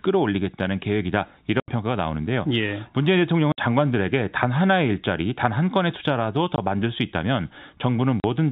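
The speech drops out four times with packet loss filled with silence: 1.6 to 1.68 s (80 ms), 3.52 to 3.58 s (60 ms), 6.56 to 6.58 s (20 ms), and 8.2 to 8.24 s (40 ms). Every gap is a multiple of 20 ms, which fits whole 20 ms packets going missing and the receiver playing plain silence in their place. You hear abrupt holes cut into the telephone-band G.711 audio.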